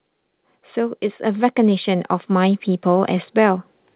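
From 0.73 s to 3.69 s, automatic gain rising is audible: the gain control treats the input as too quiet and ramps its gain up by about 10 dB, so speech and background noise swell together across the band-limited call audio, which stops at 4 kHz.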